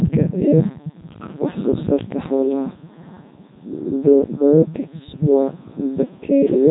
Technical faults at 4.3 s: Codec 2 vocoder

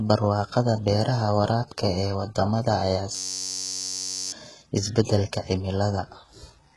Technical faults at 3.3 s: HE-AAC compression; system hang loop

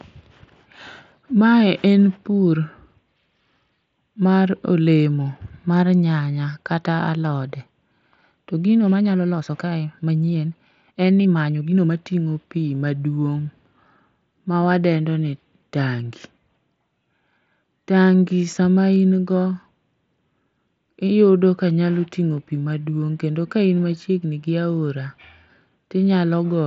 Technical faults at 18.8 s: none

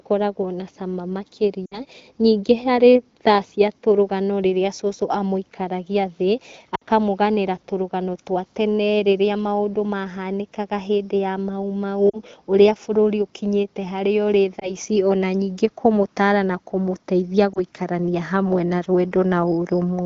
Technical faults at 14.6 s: lost AMR speech frames

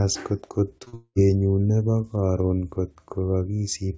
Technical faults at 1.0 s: short concealed packet loss; long network dropout

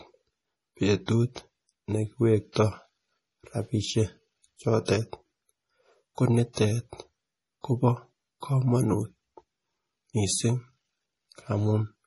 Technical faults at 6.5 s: MP3 compression; pre-echo

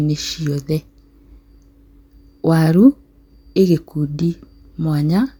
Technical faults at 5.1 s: none

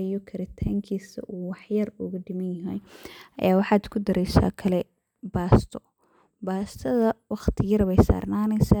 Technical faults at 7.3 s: none

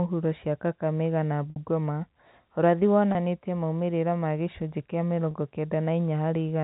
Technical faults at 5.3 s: packet loss with pitch repetition

